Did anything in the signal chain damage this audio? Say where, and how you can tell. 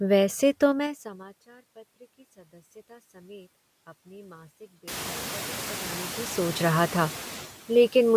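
Yes. In the call processing, noise suppressor artifacts run the whole way through: the noise floor dips by about 9 dB between phrases and swells back under speech.

There's also zipper noise at the gain stage from 0.68 to 1.28 s. The level drops in 3 dB steps, about fifteen a second, roughly 25 dB in all, and each unsmoothed step ticks.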